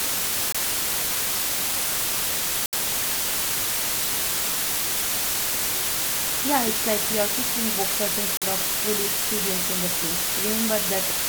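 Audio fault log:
Throughout: low bit depth with dither. A constant, even hiss sits about 5 dB above the speech, with no distortion. Only 3 bits remain, and dither turns the rounding error into steady white noise.
0.52–0.57 s, 2.66–2.74 s, 8.37–8.43 s: corrupt frame muted. Abrupt silent holes of 42, 78 and 60 ms, likely a few damaged compressed frames rejected by the decoder and replaced with silence, timing intact.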